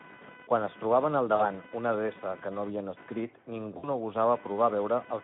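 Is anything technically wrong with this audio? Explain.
Yes, three kinds of fault are audible.

Computer activity noise runs throughout: a buzzy, chirping pulse train near 500 Hz, roughly 20 dB below the speech. Processor or peripheral load currents shift the audio circuit's shared ground, so the noise tracks machine activity rather than the speech. A spectrogram shows a harmonic comb with bands at 500 Hz spacing, present even in pauses.

Speex codec damage is plainly audible across the whole clip. The speech sounds hoarse and noisy because the CELP coder has too few bits for its excitation; the artefacts point to roughly 11 kbps. The spectrogram shows content confined to about 150 Hz to 3.5 kHz, with smeared, noisy harmonics.

VoIP packet loss concealed by the speech codec occurs at 1.35 to 1.44 s (40 ms, fitting two lost 20 ms frames) and at 3.77 to 3.88 s (60 ms). The decoder repeats its last pitch and filter with falling gain, so the sound stretches into a fading buzzy tone or coloured noise. 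The waveform shows a decaying, unnaturally periodic stretch, and the spectrogram shows frozen, flat harmonics.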